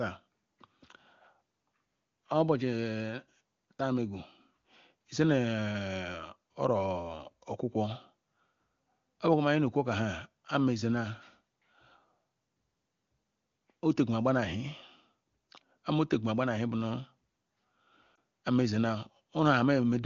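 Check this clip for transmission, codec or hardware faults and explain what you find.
There is one transmission fault, a single lost AMR speech frame at about 18.16 s. The HD Voice path sounds clean, consistent with a high AMR-WB rate. At 18.16 s, radio errors corrupted one 20 ms frame, so the decoder repeated the previous pitch and vocal-tract settings at reduced gain. This produces a brief dip or warble. The waveform shows a short amplitude sag, and the spectrogram shows a smeared, dimmer 20 ms slice.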